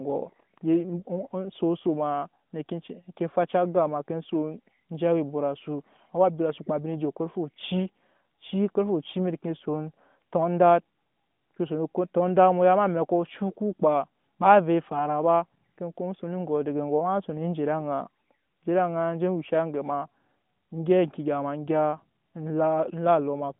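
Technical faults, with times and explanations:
No technical faults can be heard in this recording.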